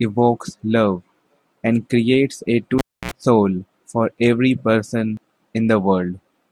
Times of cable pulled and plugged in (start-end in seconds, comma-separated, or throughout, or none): 2.78-3.11